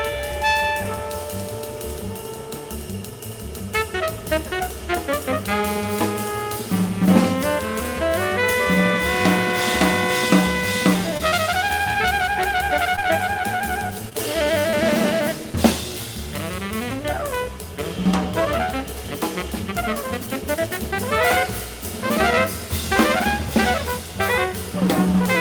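Short concealed packet loss occurs at 11.17, 11.29, 12.96 and 14.09 s. Each time about 20 ms never arrived. The receiver extended the preceding sound, leaving a brief smear or wobble. At 14.71 s comes a short stall from a late packet. The buffer emptied, so the sound is held about 18 ms with a slight buzz or dip. Nothing is lost.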